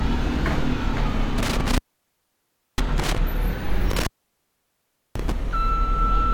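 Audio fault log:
1.38–3.18 s and 3.90–5.32 s, intermittent contact: the signal path opens for about 1.0 s and 1.09 s, leaving faint hiss. Crackle from the scraping contact at each break and reconnection distinguishes this from a clean digital dropout or a gated mute.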